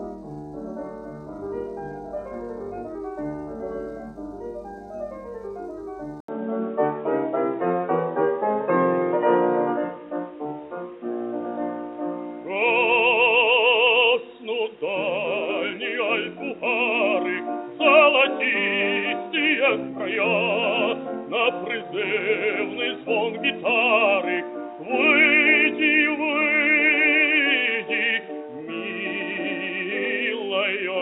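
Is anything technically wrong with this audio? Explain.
Yes. An input switched to a poorer device is heard from 6.20 s to the end, most likely the recording moving to another microphone or a headset's call path. After a brief 80 ms silence, the sound turns duller, with nothing above 3.8 kHz, shifts a few decibels in level, and gains a faint new background noise.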